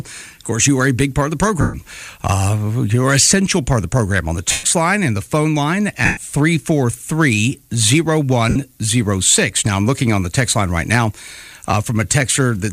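Four short gaps, at 1.61 to 1.74 s, 4.51 to 4.64 s, 6.05 to 6.18 s and 8.49 to 8.56 s, turn the sound into a hissy, smeared blur before it recovers, the last one briefer. These are lost LE Audio frames: the LC3 decoder filled each 60 to 128 ms hole by repeating the last spectrum with scrambled phase and fading it. The gap lengths fit whole 7.5 ms frames going missing over the Bluetooth link.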